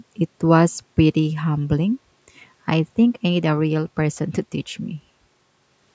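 No technical faults can be heard in this speech.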